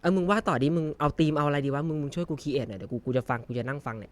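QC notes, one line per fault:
No faults found anywhere in the speech.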